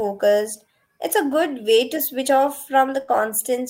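At 3.01 s, right after "way to switch off", the speech hits a burst of packet loss lasting until about 3.11 s. Several packets in a row never arrived in time. The receiver filled roughly 65 ms by repeating the last sound and fading it down. That stretch comes out as a brief held buzz or fading hiss. Then the speech picks up again further along. About 60 ms of the original is simply gone.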